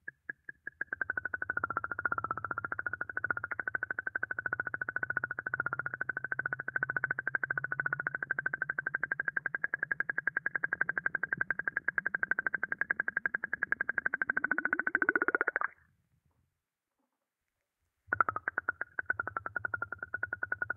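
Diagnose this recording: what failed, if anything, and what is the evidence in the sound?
Nothing failed here: it's just the sound as it was captured, with no fault in any stage from the wiring through to playback.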